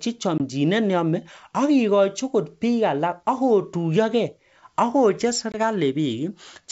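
Packet loss on an ADPCM call at 0.38–0.41 s and 5.52–5.56 s drops about one 20 ms packet each time, desynchronising the decoder's predictor: hard-edged gaps, then speech resumes slightly distorted.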